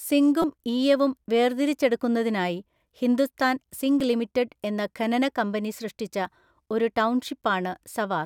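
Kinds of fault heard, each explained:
Repeated buffer: fresh audio missed its deadline, so the device replayed its last 5.33 ms block, which fits a 256-sample buffer. At 0.42 s three extra plays make a brief buzz; at 4.00 s one repeat clicks just before "ലിമിറ്റഡ് എന്ന ഖനന കമ്പനി".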